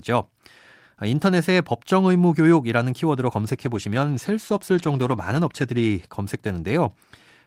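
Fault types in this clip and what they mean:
Call bitrate drop: the call's bandwidth estimate fell, so the encoder was given far fewer bits and coded the speech more coarsely. From 3.35 s to 6.01 s the sound turns rough and watery and loses its top end, which fits a rate cut from roughly 48 kbps to about 18 kbps. The degraded stretch lasts about 2.6 s before full clarity returns.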